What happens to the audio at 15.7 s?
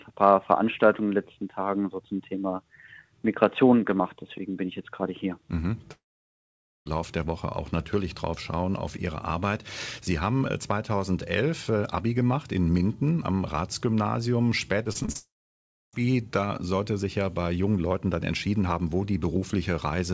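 At 15.7 s the audio sits inside a long network dropout running from 15.17 to 15.95 s. The cause is likely a stretch of lost packets. The receiver briefly extends the last sound as a fading buzz or hiss. After that, about 0.66 s of near silence follows. The sound returns at 15.95 s, and the missing part is simply gone. Around the gap, the band-limited call audio stops at 8 kHz.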